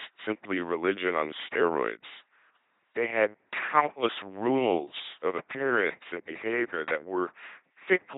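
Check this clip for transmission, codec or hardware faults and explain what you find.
The speech runs through an LPC-10 vocoder for its whole length. Each moment is rebuilt as either a pulse-driven buzz or noise through a small all-pole filter, which fits a 2.4 kbit/s rate. The result is a heavily damaged, mechanical robot voice. On a spectrogram, rigid harmonic stripes or flat noise bands appear, with nothing above 3.8 kHz.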